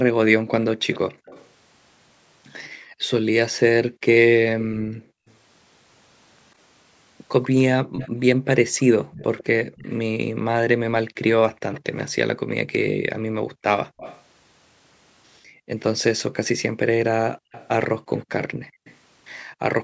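From 0.39 to 5.27 s the background is gated by the echo canceller: room noise dips by up to about 40 dB for roughly 1.5 s in total, leaving near-silent gaps in the waveform's noise floor. Overlapping that span, at 0.91–1.48 s and 4.6–5.34 s, an echo leak appears, likely residual echo, as a speech copy 138 ms behind, about 25 dB and 15 dB down, visible as a smeared, offset ghost in the spectrogram. Another echo leak runs 7.43–12.03 s at about 20 dB down, while gating from 7.81 to 9.76 s removes background for roughly 0.7 s. Gating returns from 12.92 to 19.61 s, about 1.5 s in all, with echo leaks at 13.97–14.22 s and 17.52–18.96 s, about 20 and 25 dB below the speech.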